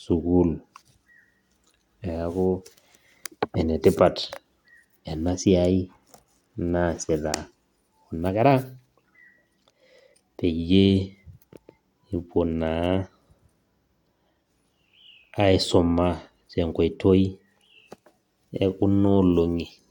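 Nothing stood out on listening to this speech recording.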